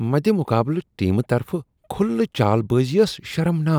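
No dropouts, clipping, glitches or other technical faults turn up anywhere in the speech.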